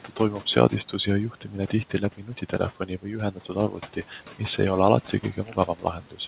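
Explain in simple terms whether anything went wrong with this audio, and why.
Yes, two related things went wrong, both caused by the noise suppressor on this call.

The first is noise suppressor artifacts, heard all the way through. The suppressor keeps turning the background noise down whenever it decides nothing is being said, so the noise dips between phrases and comes back underneath the speech. This is different from plain room noise, which would stay steady instead of rising and falling with the speech.

The second is speech cut by the noise suppressor. At 0.04–0.2 s, 1.31–1.73 s, 2.17–2.53 s, 2.8–3.06 s, 3.32–4.12 s and 5.07–6.19 s, the suppressor mistook quiet parts of the speech for noise and turned them down along with the background. Within each stretch, only brief moments are affected, about a tenth to half a second in total. Soft consonants and word endings sound swallowed or faint. 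Unlike a network dropout, the sound never goes fully silent. It just turns faint.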